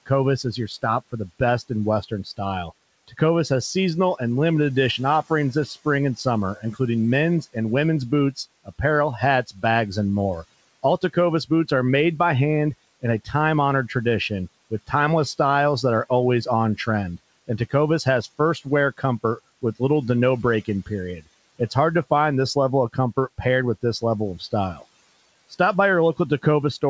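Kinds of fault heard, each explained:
Speech cut by the noise suppressor: the suppressor mistook parts of the speech for noise and turned them down. Soft sounds and word endings go faint, dropping by up to about 18 dB. This recurs across the whole clip, including near "styles that are".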